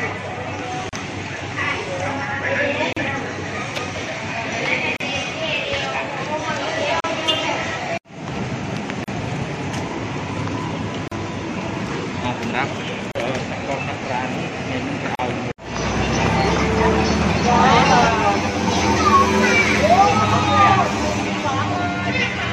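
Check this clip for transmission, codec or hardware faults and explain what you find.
Two faults are audible: a regular series of short dropouts and, near the end, a hollow comb-filtered tone.

Gap at a join of encoded pieces: silences of about 36 to 38 ms open at 0.89, 2.93, 4.97, 7.00, 9.04, 11.08, 13.12 and 15.15 s, one every 2.0 s. Separately encoded segments were joined without trimming encoder delay and padding. The waveform shows a flat notch with slightly smeared edges, and the spectrogram shows a thin vertical blank stripe.

Channel delay (comb filtering): from 18.08 s to the end, one channel lags the other by around 10 ms before the two are summed to mono. Cancellation leaves notches near 50 Hz and then roughly every 100 Hz above it, which appear as evenly spaced horizontal dark bands. The sound is hollow and phasey.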